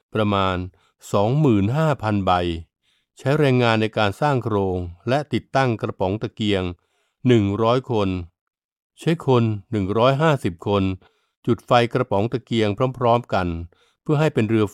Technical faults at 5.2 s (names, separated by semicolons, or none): none